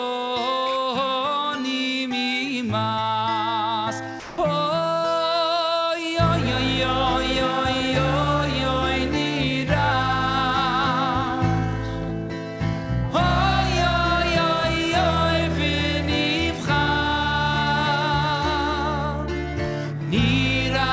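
The audio has passed through a call path, and nothing above 8 kHz survives, which fits a wideband G.722 stream at about 64 kbps. At 4.20 s the sound drops out for 180 ms, until 4.38 s. Steady, featureless noise fills the gap instead. This is likely sound dropped by the voice detector. The sender judged that stretch to be background and stopped transmitting. The receiver then played comfort noise until sending resumed.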